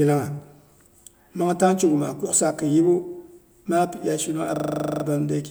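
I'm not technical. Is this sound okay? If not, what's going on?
No. Right after "iya shinung", from about 4.56 to 5.04 seconds, the speech turns into a rattling, machine-like stutter: one tiny 40-millisecond slice of sound repeats twelve times in a row, about 25 times a second. This is a system hang loop. The computer briefly froze, and the sound hardware kept replaying the last bit of audio it was holding until things recovered. Little or no speech appears to be lost.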